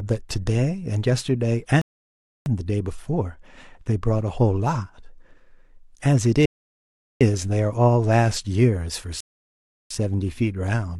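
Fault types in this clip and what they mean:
Rebuffering stall: the player ran dry on downloaded audio and just sat there waiting for more, so the speech drops to dead silence and then picks up exactly where it left off, with nothing skipped. It happens three times, from 1.81 to 2.46 s, 6.45 to 7.21 s, and 9.20 to 9.91 s, each pause adding roughly 0.65 to 0.75 s, so the clip runs about two seconds longer overall.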